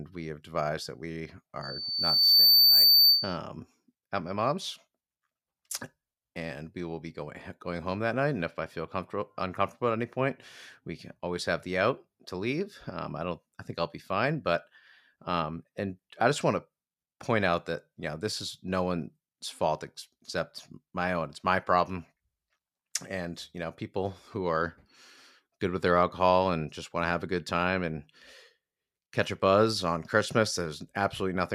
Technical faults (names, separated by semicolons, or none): loudspeaker feedback squeal